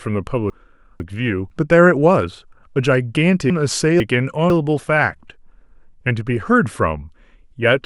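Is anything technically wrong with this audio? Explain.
Yes: chunks out of order at 0.5–1.5 s and 3.5–4.5 s, where a 500 ms chunk plays one place late, giving jumbled speech. Nothing is missing or repeated, unlike a dropout or stutter.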